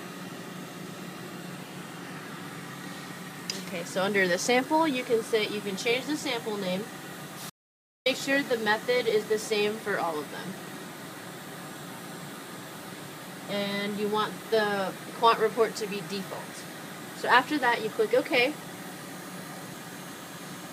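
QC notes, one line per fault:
7.50 to 8.06 s, audio dropout to silence: the sound stops abruptly mid-flow and is replaced by about 0.56 s of silence, with no room tone or background left in the gap, then resumes just as suddenly. Whatever happened during that half second is simply missing. The likely cause is a brief loss of the input signal, from a disconnected device, a failed link or an accidental mute, while the recorder kept writing silence.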